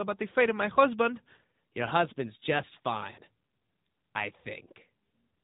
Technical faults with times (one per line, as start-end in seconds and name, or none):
3.12-3.21 lost AMR speech frames